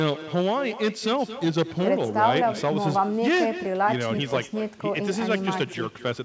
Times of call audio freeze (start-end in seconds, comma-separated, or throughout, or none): none